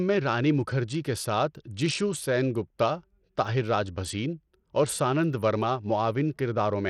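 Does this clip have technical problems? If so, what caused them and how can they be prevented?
Yes. Throughout the speech, the treble flickers and drops out with gritty, aliased noise. That's likely Bluetooth SBC compression, and the damage fits a starved stream of around 80 kbps. Record over a wired link, or use a higher bitpool or better codec.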